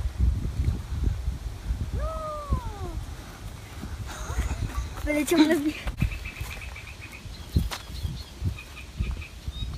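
No technical faults can be heard anywhere in the signal, which stays continuous and intact throughout.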